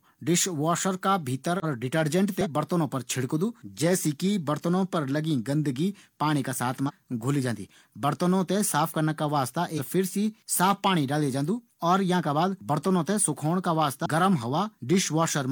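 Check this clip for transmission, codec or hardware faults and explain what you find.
Yes, there's a clear codec problem: five short bursts of damaged data in the compressed stream, at 1.60–1.65 s (right after "का भीतर"), 2.41–2.47 s, 6.85–6.91 s (just before "जांदी बर्तनों थें साफ"), 9.75–9.81 s and 14.02–14.06 s. Corrupted frames make the decoder lose sync and hunt for the next header, so each spot comes out as a brief chirp or blip of about 50 ms in the speech.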